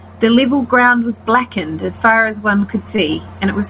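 At 1.86 to 1.90 s, and again at 2.96 to 3.00 s, the speech shows short concealed packet loss. About 20 ms of audio failed to arrive each time, and the receiver patched the gap by extending the preceding sound before crossfading back. Each event is a brief smear or wobble. On a spectrogram, the speech is already empty above 4 kHz from the narrowband call path.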